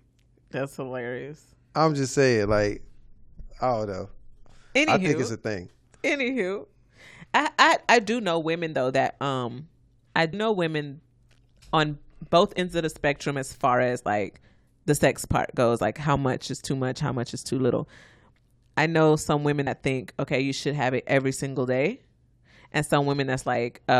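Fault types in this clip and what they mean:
Damaged data in a compressed stream: three brief glitches break into the speech, at 10.32 to 10.34 s after "though that um I", at 12.57 s after "on both", and at 19.66 s after "I know some women", each about 20 ms or shorter. Corrupted bytes make the decoder misread a frame and hunt for the next valid header.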